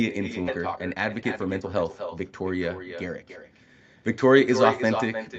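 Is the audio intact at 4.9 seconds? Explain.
No. At 4.9 seconds the speech is trailed, about a third of a second later, by a quieter, thinner copy roughly 8 dB down. It is an echo with no canceller, present throughout: the far end's loudspeaker feeds its microphone and the sound returns uncancelled.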